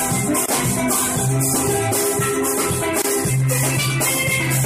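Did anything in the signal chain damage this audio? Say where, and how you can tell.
Yes. At the codec stage, MP3 compression is audible throughout. The sound has a watery, swirling quality as weak frequency lines drop in and out between frames. That plainly audible damage likely comes from a low bitrate, around 64 kbps.

A gap at a join of encoded pieces appears twice, at 0.46 s and 3.02 s. Each is a gap of about 26 ms with smeared edges, after which the sound resumes where it stopped. Separately encoded pieces were joined without trimming their start delay and end padding.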